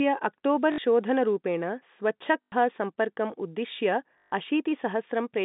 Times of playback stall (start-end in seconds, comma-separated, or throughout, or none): none